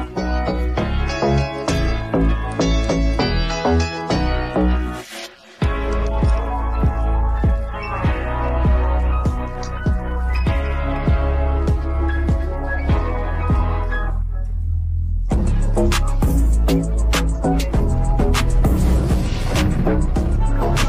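No technical faults occur anywhere in the audio, so there is nothing to describe in time order.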